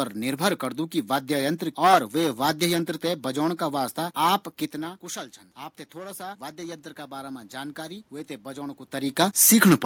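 From 5.96 s to 8.89 s the automatic gain is rising. The input falls by about 16 dB after the talker moves back near 4.5 s, so the gain control treats the signal as too quiet and lifts its gain by about 6 dB over those three seconds. Voice and room noise swell together. On a waveform the envelope widens steadily across that span, and a spectrogram shows the noise floor brightening at all frequencies along with the speech.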